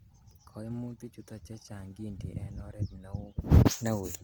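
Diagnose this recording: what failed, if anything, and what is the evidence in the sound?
Codec stage: throughout the speech, voiced sounds turn rough and grainy, pointing to Opus compression, likely in CELT mode at a rate fitting 24 kbps. Starved bands are noise-filled rather than emptied, so a spectrogram shows energy to 20.4 kHz with speckled, smeared harmonics.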